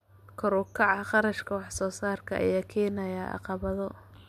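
No technical faults can be heard in this recording.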